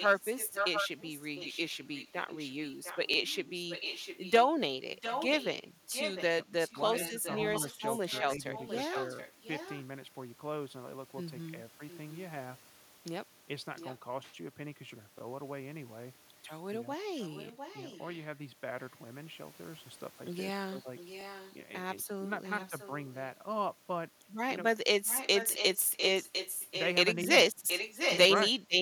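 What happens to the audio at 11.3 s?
Nothing goes wrong at 11.3 s; the speech carries on intact through that moment.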